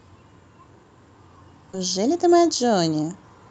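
At 1.73 to 1.75 s the receiver discarded a run of speech, either lost in transit or thrown out by an overflowing jitter buffer while newer audio was already queued. This is a skip ahead: roughly 0.7 s of speech is missing, and nothing fills the hole. Playback jumps straight from one side of the cut to the other, so the speech lurches forward abruptly, with the sounds on either side butted almost directly together.

From 1.97 s to 3.46 s the jitter buffer was holding more audio than its target. To work off that excess delay it repeatedly trimmed short slices, each one or a few pitch periods long, removing around 150 ms in total. This jitter buffer speed-up makes the speech run at about 111% of normal rate while the pitch stays put, so the rest of the clip sounds hurried. The call codec's band limit at 8 kHz is audible throughout as a dull top end.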